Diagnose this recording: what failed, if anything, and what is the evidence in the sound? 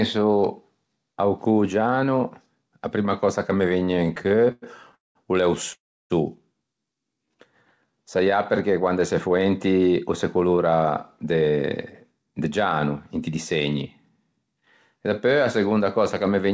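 Repeated stalls (stutter), network and jitter buffer stage: from 3.80 to 4.95 s the speech stops and restarts 17 times. The gaps fill 288 ms in total, about a quarter of that span, and the longest is 99 ms. Packets were arriving slower than playout, so the buffer kept running dry. Each time, the receiver extended the last sound until data resumed. Nothing is lost, but the delivery drags and judders.

Call audio freeze, network and jitter buffer stage: two hard stops follow. The first runs from 4.95 to 5.17 s, adding 202 ms, of which 170 ms is silence. The second runs from 5.73 to 6.12 s, adding 368 ms, with 310 ms silent. Each opens with a brief fading continuation of the last sound, then goes quiet. Speech then resumes where it left off. The likely cause is packets held up in transit, emptying the buffer entirely and shifting playout delay by the length of each gap.

Jitter buffer slow-down, receiver playout stage: from 6.94 to 7.39 s the speech runs at 88% speed, gaining 62 ms. 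From 7.87 to 8.25 s it runs at 87%, gaining 59 ms. Pitch stays unchanged while sounds are drawn out. The receiver was rebuilding its reserve by repeating single pitch periods and pause fragments many times in a row.

Jitter buffer speed-up, receiver playout stage: from 10.03 to 10.84 s the speech runs at 110%, dropping roughly a tenth of a second. From 11.24 to 13.36 s it runs at 109%, dropping roughly 0.2 s. Pitch holds while the delivery sounds hurried. The buffer held more than its target. The receiver trimmed short pitch-period pieces to pull latency back down. Throughout, nothing is present above 8 kHz, which fits the G.722 call codec at 64 kbps.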